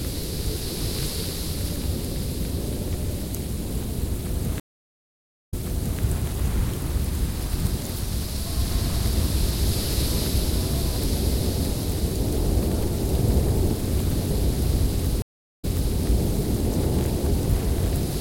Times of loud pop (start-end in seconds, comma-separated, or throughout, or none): none